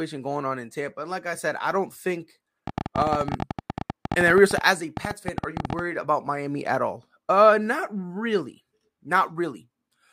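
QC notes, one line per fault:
2.67 to 5.80 s, train of clicks: about fifty near-identical ticks, 14.1 per second on average but unevenly spaced, peaking around 10 dB above the speech and clear in the pauses too. It's likely interference from nearby gear or a faulty connection or power supply injecting pulses.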